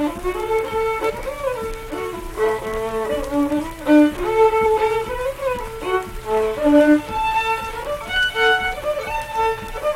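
At 1.09 s the sound suddenly lurches forward with a brief, smeared blip rather than a sharp click. At 4.65 s it happens again, a little shorter. These are compressed frames skipped. Whole blocks of coded audio were never played, whether missing from the file or rejected by the decoder as damaged. The first gap loses roughly 150 ms and the second roughly 100 ms, which fits about seven and five frames of 21.3 ms each. Because adjacent frames overlap, the seam is softened into a smear.

At 8.16 s a single sharp, isolated click cuts through. This is dropped samples, likely from a handful of samples going missing from the stream. The waveform then jumps straight from one value to a later one. Well under a millisecond is lost, so no sound is removed, but the abrupt step is heard as a tick and would show as a thin vertical line on a spectrogram.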